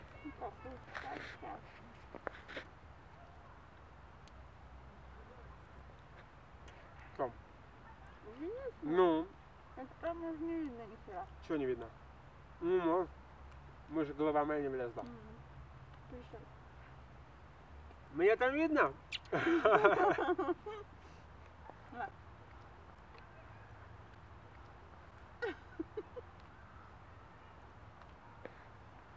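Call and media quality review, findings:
No technical faults found; the signal holds steady throughout with no dropouts, level disturbances or timing irregularities to log against any component.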